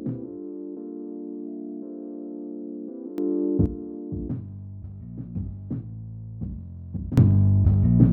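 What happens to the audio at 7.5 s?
At 7.5 s the audio sits inside a sudden gain jump. It starts at 7.18 s and lasts to the end. The level leaps up by about 20 dB at once, background noise included. The likely cause is a digital gain change applied without any ramp.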